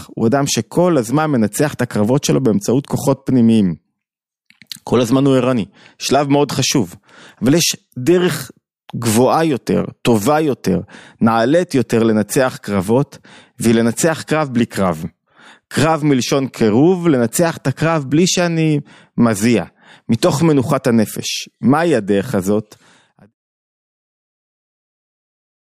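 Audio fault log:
No faults are heard in this speech clip. Near the end, a smooth fade out begins at roughly 22.5 s and brings the level down gradually to silence by 23.34 s, with no click or hard edge.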